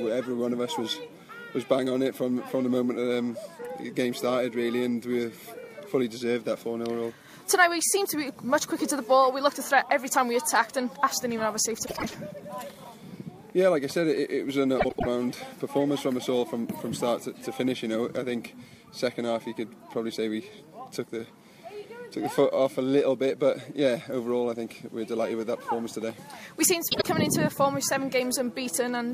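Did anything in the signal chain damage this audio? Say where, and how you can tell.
Yes, frames out of order at the network or decoder stage. At 11.85–12.15 s, 14.78–15.07 s and 26.90–27.07 s, adjacent blocks swap, causing a garbled flutter and no lost time.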